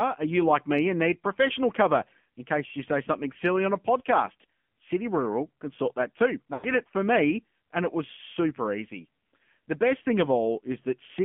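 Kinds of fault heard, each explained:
AMR narrowband mobile codec: Throughout the clip the speech carries the sound of the AMR-NB mobile codec, confined to a 150 Hz to 3.4 kHz band with nothing above. The codec rebuilds each 20 ms frame from a vocal tract model excited by a handful of pulses per 5 ms subframe. Here that damage is plainly audible as a buzzy, synthetic edge to the speech, which fits a low mode around 7.4 kbps.
Lost AMR speech frames: From 6.54 to 6.69 s, about 100 ms of speech is missing. This fits a run of five 20 ms frames that failed their checksum after radio errors. The decoder fills the gap by repeating the last good pitch and vocal tract settings at falling gain, so the sound stretches out unnaturally and fades toward silence. The speech then returns briefly weak or rough.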